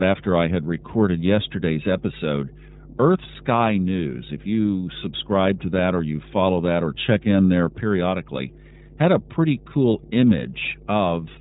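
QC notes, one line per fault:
throughout, mains hum. A steady low tone sits under the speech at 50 Hz, with some low harmonics above it, and it is loud, only about 10 dB below the speech itself. It does not change when the talker pauses, so it stands out most in the gaps. This points to a ground loop or a nearby transformer letting the power line leak into the signal path.
throughout, iLBC codec. The speech is band-limited, with nothing above 3.8 kHz, so sibilants and consonant detail are dull and boxy. The damage is plainly audible: voicing sounds rough and slightly synthetic, with a grainy, buzzy texture. This narrowband codec rebuilds each 30 ms frame on its own, which fits a 13.33 kbps mode.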